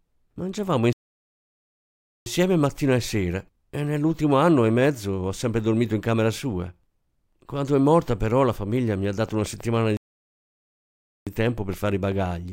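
At 0.93 s the player likely ran short of data or had its thread blocked, a playback stall: the speech cuts to silence for 1.33 s and resumes at 2.26 s with "mattina e". From 9.29 s to the end, something is likely injecting pulses, such as interference or a faulty connection, producing a train of clicks: about 6 per second at an uneven pace, roughly as loud as the speech, starting after "la famiglia mi ha". Inside that stretch, a second stall likely caused by the same starved or blocked playback silences the sound from 9.97 s to 11.27 s, 1.30 s.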